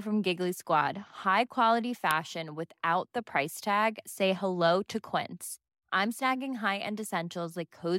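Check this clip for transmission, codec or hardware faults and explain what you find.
One fault is present in this speech clip: an uninitialised buffer at 2.11 s. A block was played before audio was written to it, so stale memory came out as samples. It sounds like a very short, loud digital burst, about 0.73 ms long, which fits a 32-sample block.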